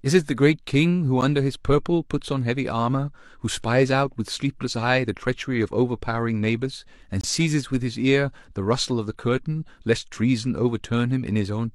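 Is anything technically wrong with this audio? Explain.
Yes. This speech has two gaps between stream segments: a single hole at 1.21 s and a longer one from 7.21 to 7.24 s. At a boundary between 2-second segments the timestamps don't quite meet, so the player inserts silence, about 10 ms in the first case and 24 ms in the second. Each is heard as an abrupt, hard-edged break. Unlike a dropout, nothing is missing: the sound resumes exactly where it stopped, only slightly delayed.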